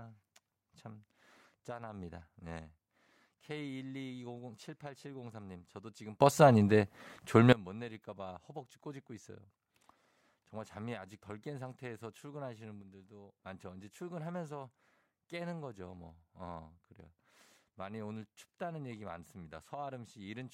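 At 6.21 s the speech and its background noise leap together by about 21 dB and stay there until 7.53 s, and from 12.82 s to 13.32 s both drop by about 6 dB. Each is a sudden gain jump, likely a digital gain change applied between two samples with no ramp. On the waveform the envelope steps abruptly at each edge, and the spectrogram shows the noise floor brightening or dimming across all frequencies at once.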